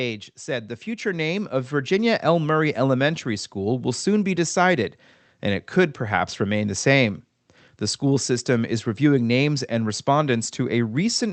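From 0.45 to 3.99 s the automatic gain rising fault is heard: the level control judged the input too quiet and raised its gain by about 8 dB. Speech and background noise swell together over several seconds, unlike compressor pumping, which rebounds between phrases.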